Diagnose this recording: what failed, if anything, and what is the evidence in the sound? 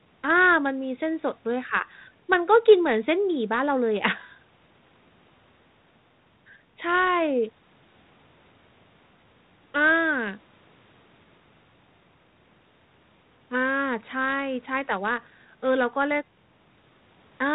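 Nothing in this speech recording points to a failure; what you hear is ordinary call audio, band-limited by the call's microphone processing and carried through G.726 ADPCM at a rate that fits 32 kbit/s, which leaves it sounding like a cordless-phone line.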